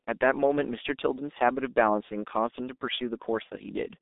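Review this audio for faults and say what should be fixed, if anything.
The whole clip has G.723.1 codec damage: muffled, hoarse speech with smeared consonants, nothing above 3.8 kHz, consistent with a 6.3 kbit/s stream. Fix: use a wideband codec.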